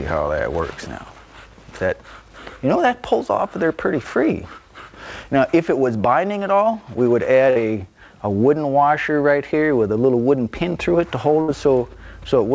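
Twice the audio briefly smears into a held, fading tail and then picks up slightly further along, at 7.50 to 7.57 s and 11.41 to 11.50 s. Each is a burst of packet loss: the receiver stretched the last good audio for about 56 and 64 ms while lowering it, then resumed with roughly 60 ms of the original skipped. The sound passed through a call path with nothing above 8 kHz, which fits G.722 at 64 kbps.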